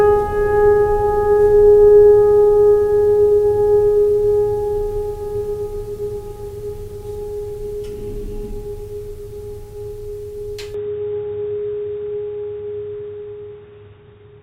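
Music that abruptly turns dull and boxy at 10.74 s, with no gap, staying so to the end: nothing above 3.8 kHz, a level shift of roughly 5 dB, and a faint new noise floor. The likely cause is an input switched to a poorer device.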